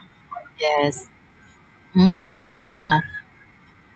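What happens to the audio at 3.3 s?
At 3.3 s the speech is inside a jitter buffer speed-up that runs from about 3.02 s to the end at 3.95 s. The receiver's buffer had grown beyond its target, so it repeatedly cut out short pieces of one or a few pitch periods, removing about 150 ms and playing the passage at 114% speed with unchanged pitch. It sounds hurried. On a spectrogram the harmonics hold their frequencies, below the 8 kHz codec cutoff, while syllables shorten; the waveform shows compressed envelopes and tiny splice points.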